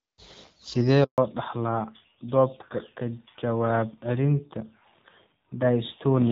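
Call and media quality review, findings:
Handover gap, 1.04–1.18 s: speech cuts out abruptly for 140 ms, then resumes. Network handover; no speech frames delivered while the call moved between links, so that stretch is simply missing. Wideband path before the gap sounds clean, consistent with HD Voice around 12.65 kbit/s.

Fallback to narrowband, 1.18 s to end: bandwidth collapses, nothing above 4 kHz, speech duller and rougher. Codec renegotiated after handover from AMR-WB to AMR-NB, sound suggesting a low narrowband rate near 7.4 kbit/s.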